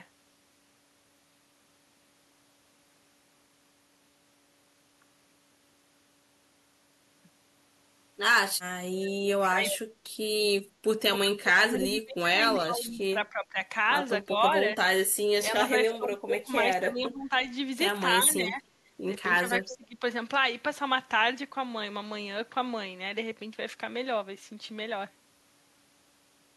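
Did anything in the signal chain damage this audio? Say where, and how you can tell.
Yes. Echo leak, 9.05–9.79 s and briefly 19.70–19.76 s, in call processing: a delayed copy of the speech returns 297 ms and then 286 ms late, about 10 dB and about 15 dB below the talker, likely loudspeaker pickup an echo canceller failed to remove.

Speech suppressed in double talk, 9.41–9.95 s and 10.93–20.03 s, also call processing: the talker drops by up to about 25 dB in pieces, roughly 0.2 s in the first span and about 4 s in the second, likely the canceller treating overlapping speech as echo.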